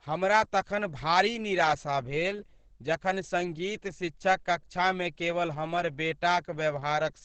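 Throughout the speech, the sound is muffled and hoarse. This is likely heavy Opus compression in its speech mode, fitting a rate near 12 kbps. A spectrogram would show everything cut off flat near 8 kHz, with smeared, noisy harmonics below.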